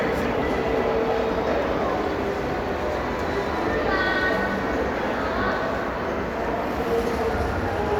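No technical faults are audible anywhere in the recording; the sound runs uninterrupted with nothing to flag.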